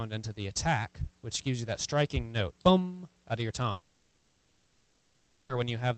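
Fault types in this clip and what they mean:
Long network dropout: From 3.71 to 5.56 s the last sound carries on as a fading buzz or hiss, likely lost packets, then resumes with audio missing.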